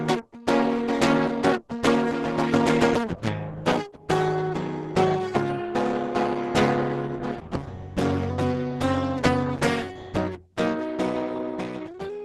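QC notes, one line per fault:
Throughout: Opus compression, likely at a very low rate in the codec's speech-oriented hybrid mode. The music sounds muffled and hoarse, nothing above about 12.1 kHz, and the damage is heavy: tones come out rough and grainy because starved bands get filled in rather than carried faithfully, which fits something around 12 kbps.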